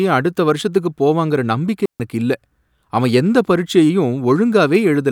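At 1.86 s, right after "அடுத்த வருஷத்துக்கு போவாங்கற நம்பிக்கை", a digital wireless dropout cuts the speech for about 143 ms, until 2.00 s. The receiver lost too much data and muted with a quick fade, leaving a clean near-silent hole. The waveform flattens abruptly, and the spectrogram shows a blank vertical gap with no noise burst at either edge.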